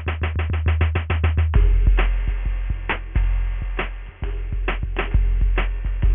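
Aliasing runs throughout the music. Energy above 3 kHz folds back as gritty, unrelated tones, about 15 dB down. This fits unfiltered 6 kHz resampling.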